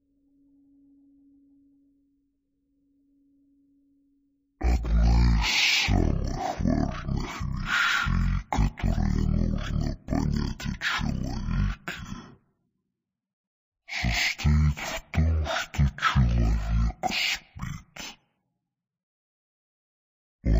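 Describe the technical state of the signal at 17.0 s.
At 17.0 s the signal shows stereo read as mono, present throughout the clip. Left and right samples are being played back one after another as one channel. Everything runs at half speed and sits an octave low. A fainter mirrored copy appears in the upper spectrum.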